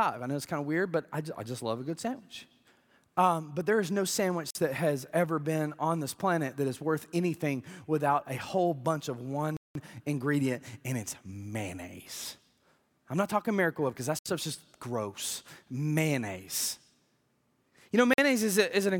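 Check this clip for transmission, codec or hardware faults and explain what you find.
Four blocks of digital silence turn up in this speech clip. The first runs 4.51–4.55 s, between "but there is no" and "that has ever been". The second, the longest at about 186 ms, sits at 9.57–9.75 s after "a whole bunch of". The third spans 14.19–14.26 s before "stuff's just gross", and the last falls at 18.14–18.18 s. The output most likely wasn't filled in time, so the sound cut out with no fade. You get a short hole. The 46 ms gaps fit a 2048-sample buffer, and the long one fits four of them.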